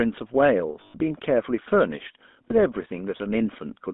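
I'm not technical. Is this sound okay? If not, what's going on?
No. A GSM full-rate codec runs throughout: it rebuilds the speech from a crude voice model, cutting everything outside 200 Hz to 3.6 kHz and leaving a buzzy, gravelly roughness. Lost GSM frames at 0.80 to 0.95 s and 2.48 to 2.51 s were each covered by repeating the last good sound, so you hear a brief rough, metallic ring.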